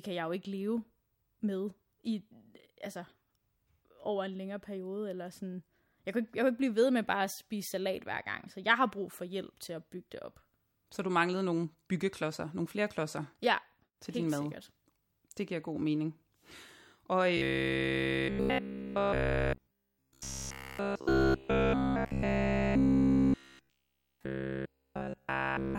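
From 17.37 s to 25.78 s, new audio likely arrived too seldom, so a short buffer of about 15 ms was repeated. This is robotic sound from repeated short buffers: a rigid, metallic buzz at 66.7 Hz covers essentially the entire stretch while roughly following the speech.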